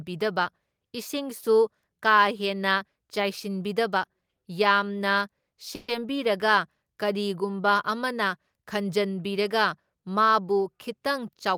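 At 5.75 s the speech stalls for about 0.15 s in a call audio freeze: the last sound is stretched into a short fading buzz instead of dropping to silence, then speech resumes exactly where it stopped, now running about 130 ms later. Nothing is skipped. The likely cause is delayed packets draining the jitter buffer. On a spectrogram the final frame's harmonics smear horizontally and fade, and the waveform shows a decaying, repetitive stretch before normal speech returns.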